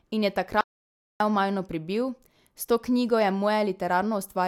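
At 0.61 s the speech cuts off abruptly and the clip falls to silence until 1.20 s, when it resumes mid-flow. This is an audio dropout to silence lasting about 0.59 s. The gap holds no room tone or noise floor at all, so the input signal was likely lost briefly, through a disconnected device, failed link or momentary mute, while recording continued. Whatever was spoken in that interval is missing.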